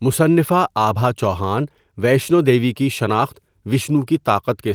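No technical faults can be heard in this speech recording; the signal stays steady and intact throughout.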